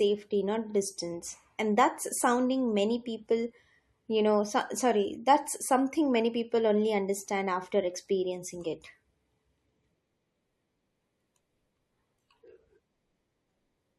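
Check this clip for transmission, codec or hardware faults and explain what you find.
One codec fault is audible in this speech clip. Repeated frames, 0.69 to 0.73 s: a 42.7 ms block, consistent with two compressed frames, plays twice, producing a short stutter and lengthening the audio by 42.7 ms.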